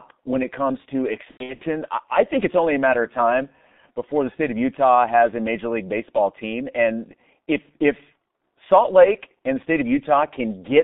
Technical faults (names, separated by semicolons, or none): G.723.1 codec; VoIP packet loss concealed by the speech codec